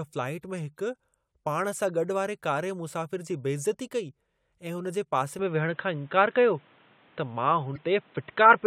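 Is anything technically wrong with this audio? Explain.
Yes, there are two kinds of fault in this speech recording.

Damaged data in a compressed stream occurs at 0.58 s and again from 7.72 to 7.78 s. Some bytes in the encoded stream were corrupted, so the decoder could not read those frames, lost sync, and had to search for the next valid frame header. Each time, this comes through as a brief chirp or blip. The first is very short, and the second is longer.

From 5.39 s, right after "ऐं हुन जे पासे", to the end, the sound changes character. This is most likely an input switched to a poorer device, such as a different microphone or a headset's call profile. Nothing above 4 kHz gets through after the switch, so the speech abruptly turns dull and boxy. There is no gap at the change. The level shifts by about 5 dB, and a new background noise appears, about 35 dB below the signal.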